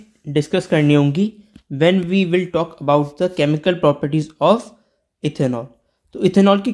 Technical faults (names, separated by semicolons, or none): none